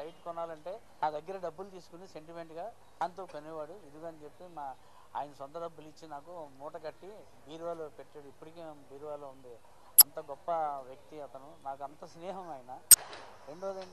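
Damaged data in a compressed stream appears four times: 1.00 to 1.03 s, 2.98 to 3.01 s, 9.98 to 10.02 s and 12.91 to 12.94 s, each about 30 to 36 ms. Corrupted bytes make the decoder misread or reject frames and lose sync until it finds the next frame header, leaving a brief chirp, squawk, click or short hole.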